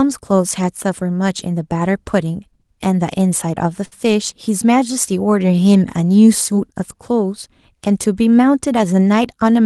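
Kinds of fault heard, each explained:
Short stall from a late packet: around 3.85 to 3.94 s a packet arrived late, so the receiver held the last sound about 61 ms, delaying everything after.
Jitter buffer speed-up: from 9.06 to 9.60 s the receiver trimmed pitch periods, roughly 50 ms in total, so the speech runs at 107 percent speed, same pitch.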